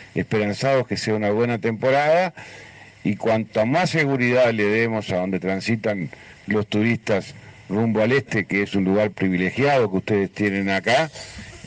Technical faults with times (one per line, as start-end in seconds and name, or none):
10.47-11.66 pre-emphasis left on